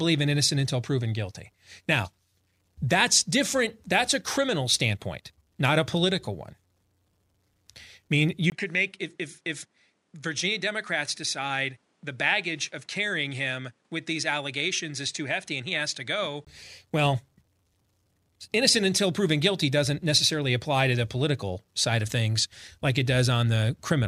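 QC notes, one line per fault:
8.50–16.47 s, likely input switched to a poorer device: duller, about 5 dB quieter, spectrogram empty above 11.1 kHz, noise floor some 40 dB down, 20 ms waveform gap at switch.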